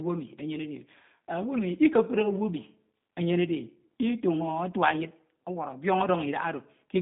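Speech passed through the G.729 codec, and the damage is plainly audible for the whole clip. The sound was squeezed into a narrow telephone band, roughly 150 Hz to 3.7 kHz, so nothing above 3.7 kHz survives and the top end sounds dull and boxed-in. At what sounds like an 8 kbit/s rate, the voice is reassembled from a vocal tract filter, a pitch predictor and a few pulses per frame, leaving it rough, buzzy and faintly synthetic.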